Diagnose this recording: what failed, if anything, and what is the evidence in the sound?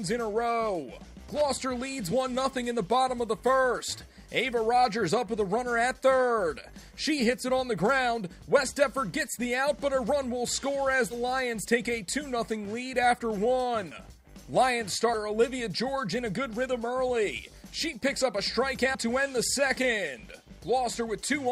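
Analogue wiring: loose connector crackle from 1.35 to 1.54 s, an irregular scratchy burst where a worn contact repeatedly broke and remade the signal path.

Codec or storage: compressed frames skipped at 2.11, 11.10–11.14, 13.91–13.96, 15.13 and 18.94 s. Each join marks audio jumping ahead by whole 10 ms frames, losing a few tens of milliseconds.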